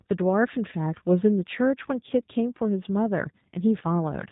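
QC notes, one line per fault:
Throughout, G.729 codec: the speech sounds muffled above 4 kHz and plainly rough and synthetic. The coder keeps only a vocal tract shape, pitch and a handful of pulses for each 10 ms frame, which fits the 8 kbit/s G.729A variant.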